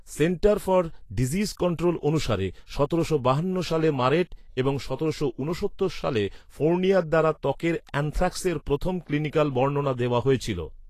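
From start to finish the speech carries plainly audible damage, most likely Vorbis compression at a low setting, around 35 kbps. The treble is coarsely quantised, so fine detail turns to grainy hiss. Tones sound roughened. Consonant attacks are blurred and smeared.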